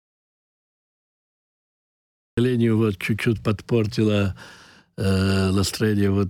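From the first instant to 2.37 s the clip is in an audio dropout to silence, already under way when it begins. This is dead silence rather than a quiet lead-in: there is no room tone or hiss at all, and at 2.37 s the sound arrives abruptly, mid-flow, with no fade or attack to ease it in. That hard, already-running entry separates it from a late start or a gate. The likely cause is a lost input while the recorder kept writing zeros.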